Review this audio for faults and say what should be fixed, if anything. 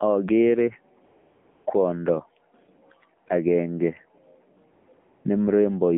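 The speech passes through the AMR narrowband mobile codec throughout. Sound is confined to 150 Hz to 3.4 kHz, and the plainly buzzy, synthetic timbre fits a low mode around 7.4 kbps.

AMR comfort noise replaces the real background from 1.06 to 1.66 s, then at 4.74 to 4.88, 4.94 to 4.98 and 5.00 to 5.24 s. The sender stopped sending speech frames, so smooth synthetic noise switches in for those gaps.

To prevent both, record or route the call over a wideband path, and disable discontinuous transmission so the background is never substituted.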